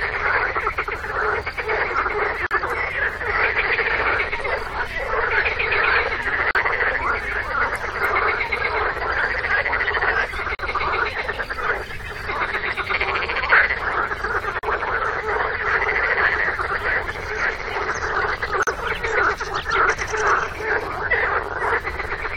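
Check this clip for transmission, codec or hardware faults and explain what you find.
One fault type: a gap at a join of encoded pieces, at 2.47, 6.51, 10.55, 14.59 and 18.63 s, every 4.0 s. Each is a 40 to 44 ms dropout with smeared edges: separately encoded segments kept their encoder start delay and final-frame padding when joined.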